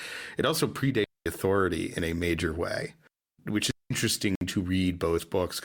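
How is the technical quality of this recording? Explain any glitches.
The recording has three audible glitches: two wireless dropouts and one short stream gap.

From 1.04 to 1.26 s, just before "authority in a major", there is a digital wireless dropout. It happens again from 3.71 to 3.91 s, right after "a major way which". Each time, the receiver lost too much data and muted. The holes last about 220 ms and 200 ms. They are near silent, with no noise burst on either side.

At 4.35 s there is a gap between stream segments. Two segment timestamps did not quite meet, so the player filled a 58.5 ms hole with silence. It sounds like a brief, hard-edged cut in the speech.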